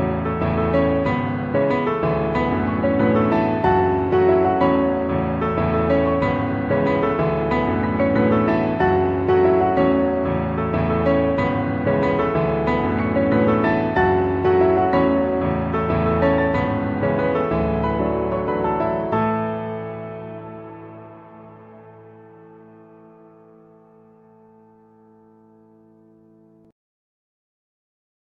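No technical faults can be heard anywhere in the audio. Nothing in the sound points to a problem with how it was captured, processed or delivered.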